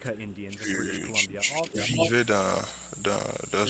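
Speech, band-limited to 8 kHz as the call path allows, with two separate faults. From 0.00 to 0.91 s and again from 1.26 to 1.77 s the talker's level sinks and breaks up, by as much as about 20 dB in the first stretch and around 15 dB in the second, for roughly 0.7 s and 0.4 s in total. This is speech suppressed in double talk: the echo canceller, likely facing both sides talking at once, attenuated the near-end voice along with the echo it was trying to remove. Overlapping the end of the second dip, from 1.66 to 2.10 s, a delayed copy of the voice comes back about 0.4 s late and at roughly the same loudness as the direct speech. That is likely an echo leak, where the far end's loudspeaker output reached its microphone and the canceller failed to subtract it before sending it back.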